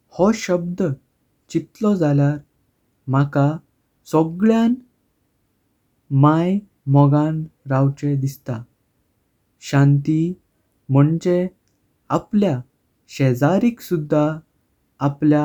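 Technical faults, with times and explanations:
No technical faults can be heard in this speech recording.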